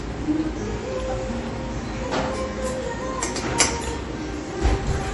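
An everyday-sound recording carries audible MP3 compression from start to finish. Nothing survives above about 11.4 kHz, and the remaining detail has a plainly audible coded, unsteady quality, which points to a low bitrate, around 48 kbps. The likely cause is an encoder starved of bits, discarding the treble and dropping weak frequency components frame by frame. A plain low-pass filter would dull the top just as cleanly but leave no such frame-to-frame instability.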